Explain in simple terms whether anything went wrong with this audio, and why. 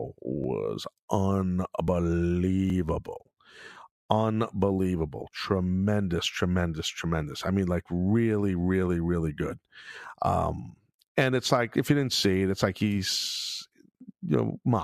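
The recording software most likely failed to collect incoming audio before the hardware overwrote it, a dropped buffer (overrun). Each lost piece is simply cut out and the edges are joined, so there's no gap, just a small jump in the speech. This happens at 0.44, 1.88, 2.7 and 10.04 seconds, the last between "really really really good" and "um and it's like". The loss at 1.88 is longest, around 70 ms.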